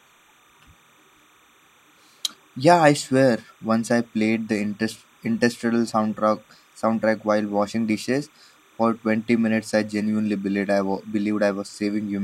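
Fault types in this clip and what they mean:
Timecode bleed: Linear timecode has leaked into the speech from a nearby track or cable. It runs through the whole clip. A faint square-wave chirp flips between pitches near 1 and 2 kHz. It sits far below the voice and warbles in a 30-frame-per-second rhythm.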